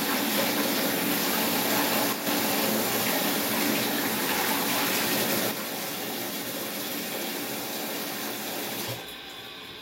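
At 2.13 to 2.27 s the level drops abruptly by about 6 dB, and again from 5.51 s to the end. This is one channel dropping out, likely: the mono sum loses half its shared content, and anything carried only by that channel disappears.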